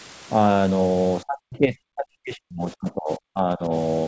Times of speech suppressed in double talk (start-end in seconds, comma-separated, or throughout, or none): 1.23-3.72